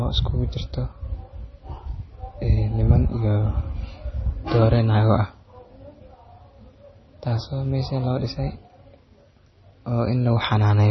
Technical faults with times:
0.00-10.90 MP3 compression

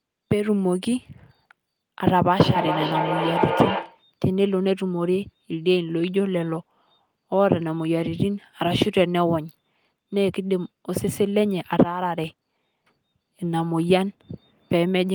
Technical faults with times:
2.37-4.06 feedback echo between two devices

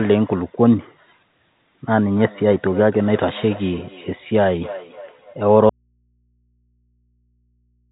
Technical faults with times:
2.11-5.36 feedback echo between two devices
5.69-7.91 audio dropout to a faint residue

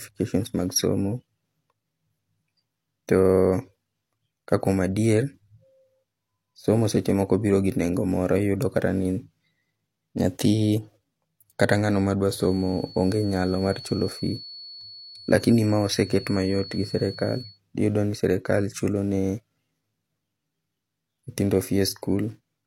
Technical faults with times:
12.30-17.60 feedback whistle

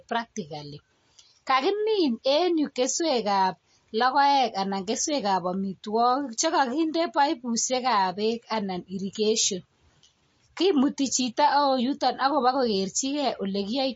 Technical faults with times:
0.00-13.95 MP3 compression

